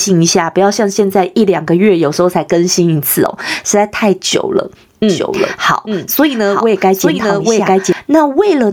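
A speech recording with input gain that was likely set far too high and held in check by a fast limiter or compressor, causing gain pumping throughout: the level swings by about 15 dB, leaving loud and soft passages squashed close together. From 5.09 s to 7.93 s there is also a doubled audio track, likely from a second, slower capture path or an out-of-step edit. A full-band copy of the speech trails about a second behind, a few decibels quieter, with no reverberant decay or room colour, and it cuts in and out abruptly at those times.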